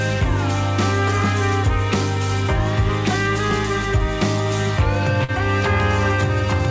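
This audio came through a call path, and the band stops at about 8 kHz, which fits a wideband codec like G.722. The one real fault is a short concealed packet loss at about 5.24 to 5.30 s. Roughly 40 ms of audio didn't reach the decoder in time, so the receiver patched the gap by stretching out the last bit of sound for about 44 ms and then blending back in. You hear a quick smear or wobble right there.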